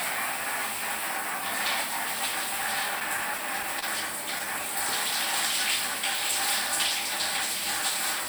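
From 3.00 to 3.85 s the audio hits repeated stalls (stutter): five brief hitches, the longest 29 ms, where late packets let the jitter buffer run dry and the last sound was stretched to cover. Unlike dropouts, nothing goes missing or silent; the sound just drags.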